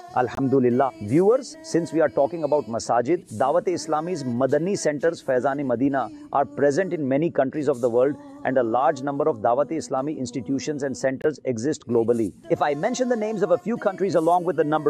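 The audio has two corrupt frame muted dropouts, at 0.35 to 0.39 s and at 11.22 to 11.26 s, each about 40 ms of sudden silence. Damaged compressed frames were rejected by the decoder and replaced with silence, so the sound cuts out abruptly while the timing stays intact. On a waveform each shows as a flat, near-silent stretch with hard edges. On a spectrogram each appears as a narrow, empty vertical strip across all frequencies.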